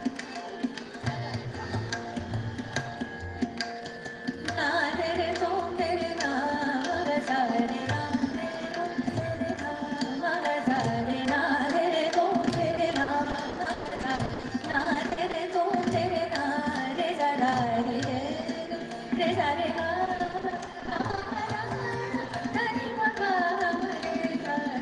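From 12.75 to 15.35 s, and again from 20.05 to 21.37 s, there's repeated packet loss. The holes get papered over by extending the last sound, so both stretches come out choppy and robotic. The first has gaps up to 120 ms, and the second has denser 20 ms ones.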